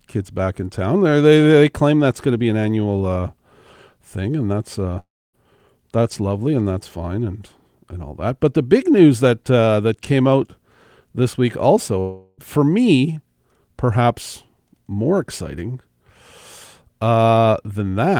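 Speech with two gaps where the audio stops and the sender's sound is lost, most likely long network dropouts. After "thing and that's uh", from 4.99 to 5.35 s, the last sound smears into a brief fading buzz and then about 0.27 s of silence. On a spectrogram this shows as smeared harmonics followed by a blank band, and on the waveform as a decaying tail and a flat line. Between "this week" and "for me perhaps more", from 12.00 to 12.40 s, a fading, buzzy continuation fills the whole gap, visible as stretched, blurred horizontal streaks without onsets.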